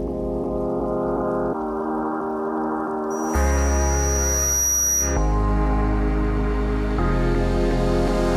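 From 3.10 to 5.39 s, loudspeaker feedback squeal: the microphone–speaker loop runs away at 5.8 kHz, swelling over about a second and a half to match the surrounding sound.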